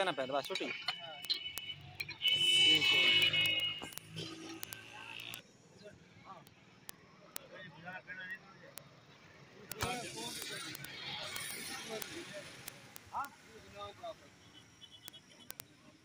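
A digital link is being read by a receiver running on its own clock rather than locked to the sender's. The two clocks disagree by something like 400 ppm, so they slip past each other roughly every twentieth of a second, and at each slip a single sample is dropped or repeated. The result is word clock ticks from 0.12 s to 16.02 s: a steady train of sharp ticks of uneven strength, around three hundred in all, running through the whole clip.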